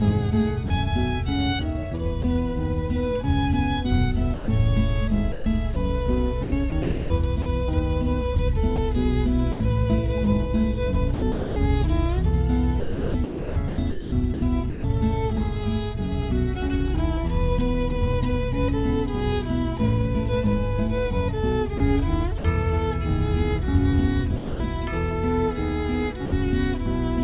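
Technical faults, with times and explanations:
0.68–0.70 s, 2.22–2.24 s, 24.36–24.60 s and 26.26–26.32 s, sound dropped by the voice detector: brief gaps filled with steady comfort noise, likely because the sender's detector judged quiet sound to be background and stopped transmitting.
4.34–9.60 s, 11.14–14.84 s and 21.78–22.44 s, sound chopped by the voice detector: the detector likely toggled sending on and off repeatedly, so quiet edges become synthetic noise.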